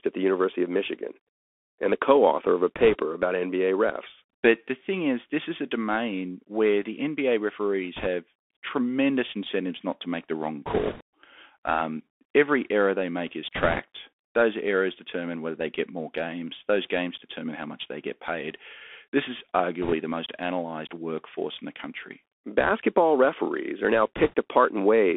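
Throughout, the speech sounds thin and boxed-in, with a granular hiss beneath it, scratchy s sounds and roughness on loud bright moments. That is the Bluetooth CVSD headset codec. Its one-bit up-or-down coding fits a 64 kbps link, with a passband of roughly 250 Hz to 3.5 kHz, and its adaptive step cannot keep pace with fast, loud changes.

Short bursts of rushing, crackly noise, without sharp clicks, come at 2.76–2.97 s, 7.97–8.07 s, 10.66–11.02 s, 13.55–13.79 s, 19.82–19.94 s and 24.17–24.34 s. These are bit errors on a Bluetooth voice link. Flipped bits each nudge the waveform slightly before fading, at a few percent of bits, heaviest near 10.7 s.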